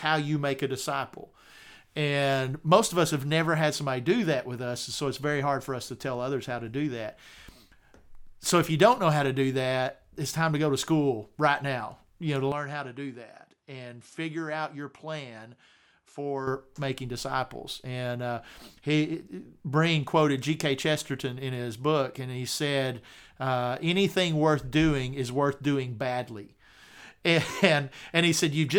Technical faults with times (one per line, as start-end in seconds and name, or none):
12.52-16.47 input switched to a poorer device